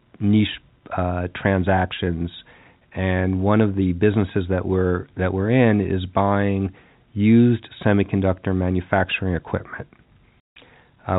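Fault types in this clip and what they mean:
Packet loss filled with silence: Lost audio packets were replaced by silence, leaving a 160 ms hole from 10.41 to 10.56 s, just after "used semiconductor manufacturing equipment". The length fits eight 20 ms packets dropped in a row over the telephone-band G.711 link.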